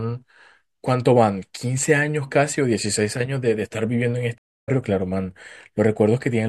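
At 4.38 s a stream reconnect cuts the speech for 220 ms. The player lost its connection and restarted decoding, resuming about 150 ms further on by 4.69 s.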